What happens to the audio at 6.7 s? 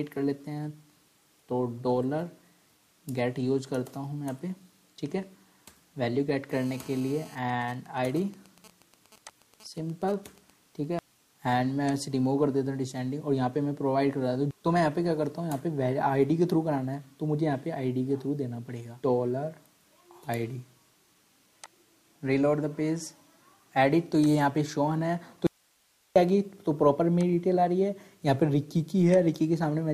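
A GSM phone buzz sits under the audio from 6.52 to 7.35 s. A nearby 2G phone on a call pulses its radio about 217 times a second. The audio circuit rectifies those bursts. The result is a steady, raspy 217 Hz buzz, about 24 dB below the signal.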